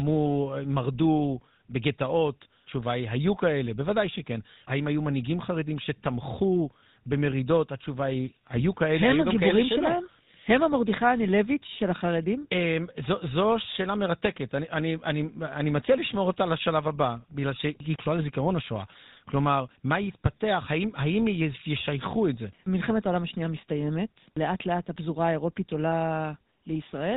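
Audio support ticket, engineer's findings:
GSM full-rate codec, throughout. Buzzy, gravelly roughness on speech, plainly audible. Nothing above 4 kHz. Vocal-tract model driven by regularly spaced pulses with sparse excitation. Texture fits a 13 kbps full-rate stream somewhere in the call path.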